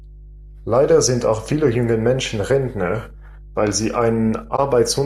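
Speech recording with a steady mains hum at 50 Hz running through the whole clip, sitting roughly 20 dB below the speech, with some low harmonics. The tone points to a ground loop or a transformer close to the signal path, coupling the power line into the audio. At 4.56 to 4.60 s there is a corrupt frame concealed by the decoder, lasting about 36 ms, consistent with a single damaged AAC frame that was muted or replaced from the previous good spectrum.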